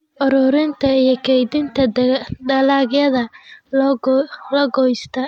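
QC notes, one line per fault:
2.42–3.57 s, Bluetooth SBC bit pool drop: the treble dulls and a gritty noise rises under the speech, then both clear. This fits the encoder cutting its bit pool from 28 to 12, near 96 kbps, starving the upper sub-bands and quantising the rest coarsely.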